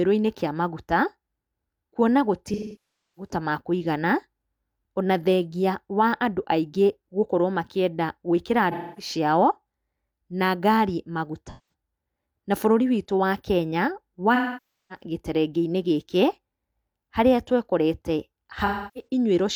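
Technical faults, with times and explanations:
2.53–3.31 s, 8.71–9.12 s, 11.47–11.73 s (right after "na ngari"), 14.35–15.03 s and 18.65–19.07 s: AAC frame loss with concealment. Runs of frames dropped out, roughly 0.21 to 0.64 s each, and the decoder patched them from the last good spectrum, so each gap is filled in instead of going dead.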